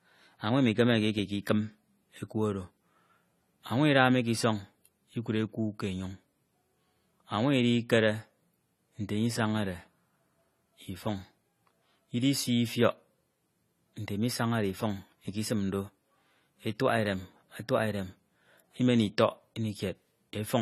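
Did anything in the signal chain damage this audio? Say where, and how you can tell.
Yes: at the codec stage, likely AAC compression at roughly 32 kbps, coarse quantisation removes everything above 14.1 kHz throughout, leaving the speech dull and smeared.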